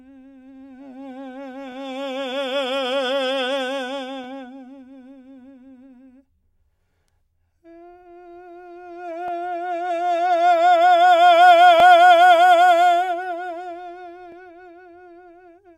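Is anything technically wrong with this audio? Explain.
Yes. Overlapping chunks occur at 1.72–1.74, 4.24–4.26, 9.28–9.30, 11.80–11.82 and 14.32–14.34 s. The music was handled in 2.5 s chunks that each start early, so 20 ms replays at every join, heard as a regular click or stutter. On the waveform and spectrogram this shows as a discontinuity and a thin vertical stripe at each join.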